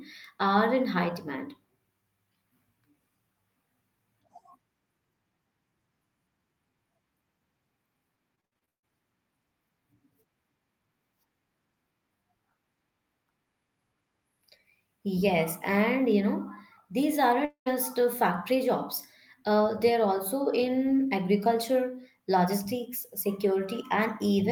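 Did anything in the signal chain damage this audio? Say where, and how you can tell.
Yes. The network stage caused repeated packet loss (robotic sound) from 8.35 to 8.85 s. Seven gaps, the longest 136 ms, were each patched by stretching the previous sound, so about 59% of that half-second is synthetic fill. The result is choppy and robotic, with pieces missing.

At 17.45 to 17.68 s the audio turns into a smeared continuation that decays, then goes silent for about 100 ms before resuming with a piece absent. The cause is likely a long network dropout, where the receiver concealed the gap until its fill ran out.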